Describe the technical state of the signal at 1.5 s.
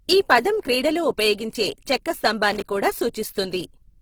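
At 1.5 s the speech sounds rough and grainy, with a noisy, fizzy texture where clean tonal detail should be, and the highs still reach up to about 20.2 kHz rather than being cut off. This runs through the whole clip. The likely cause is Opus compression in its CELT music mode. When bits are scarce, the encoder preserves each band's energy but fills the band with folded or noise-like content, which points to a low bitrate around 16 kbps.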